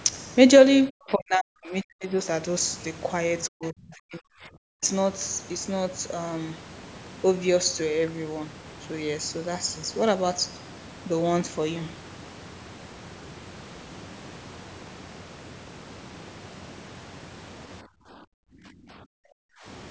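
From 0.89 to 2.17 s the speech sinks sharply, by as much as about 40 dB, for roughly a second in total. This is speech suppressed in double talk. The likely cause is that both sides spoke at once. The echo canceller could not tell the near talker from the loudspeaker echo, so it pulled the microphone signal down. The voice dips, loses its high end or cuts out in pieces.

The same dip returns from 3.48 to 4.83 s, again as deep as about 40 dB, over about one and a half seconds. Inside it, from 3.64 to 3.69 s, a brief scrap of the other side's voice leaks through. It sits about 25 dB below the speech. It is likely loudspeaker sound that the echo canceller failed to remove. It comes through as a faint fragment.

From 17.82 to 19.66 s, speech is suppressed in double talk once more. The drop again reaches about 40 dB, and about two seconds of speech is affected. The voice is pulled down until near the end. 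Throughout, the call's microphone processing trims the lowest bass and leaves nothing above 8 kHz. That is normal and not a fault.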